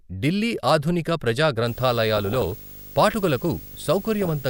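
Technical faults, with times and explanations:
1.67–4.49 s, video or display buzz: just after "ఢిల్లీ ఆధునిక ప్రజా" a 50 Hz field-rate buzz with hash appears, about 20 dB below the speech, plus a 15.6 kHz line-rate whine, from display circuitry coupling into the audio.
2.17–2.52 s and 4.21–4.30 s, DAB burbling: short blips of noise in single sub-bands. Weak reception let bit errors past error correction into the MP2 frames, roughly one percent at worst.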